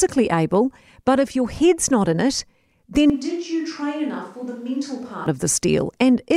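At 3.10 seconds the speech suddenly turns roomy and hollow. The bass thins out and the level drops by roughly ten decibels. Room noise becomes audible, sitting about 35 dB below the speech. This is likely a switch to a distant microphone, after the close microphone's signal failed or was left out. The farther microphone picks up more reflections and less direct sound. At 5.26 seconds the close, fuller sound returns just as abruptly.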